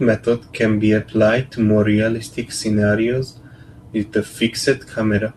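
A speech recording with no technical faults to report. Nothing in it calls for a time, a value or a cause to be noted.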